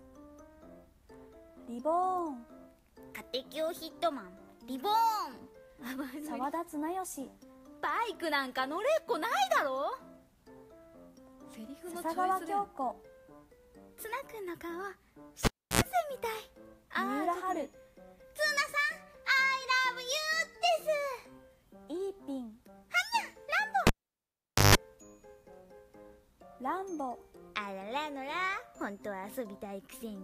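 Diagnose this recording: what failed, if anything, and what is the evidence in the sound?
Analogue wiring: cable pulled and plugged in at 15.45 and 23.87 s. Pops bracket 0.32 and 0.83 s gaps, with 60 and 50 Hz tip-contact buzz.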